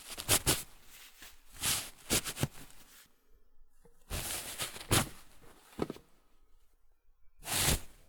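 No technical faults can be heard anywhere in this recording.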